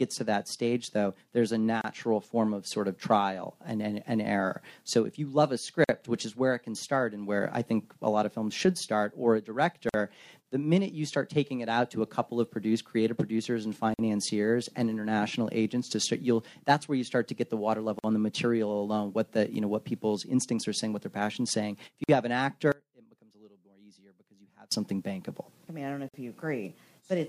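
At 1.81 s a 29 ms silence opens, then 49 ms silences follow at 5.84, 9.89, 13.94, 17.99 and 22.04 s, a steady 4.0 s spacing. This is a gap at a join of encoded pieces: separately encoded segments were butted together with their start delay and end padding left in, so the sound drops out with slightly smeared edges and resumes where it stopped.

From 22.72 to 24.72 s the sound falls by about 28 dB and turns faint, as if its centre has been removed. The likely cause is one channel inverted: with one stereo side reversed in polarity, material common to both channels cancels on a mono sum, leaving only their difference.

A final 49 ms gap at a join of encoded pieces falls at 26.09 s, keeping the same 4.0 s rhythm.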